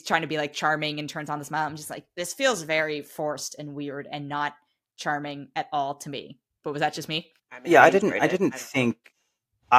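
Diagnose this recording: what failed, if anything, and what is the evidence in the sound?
Nothing failed; no fault is audible in the recording.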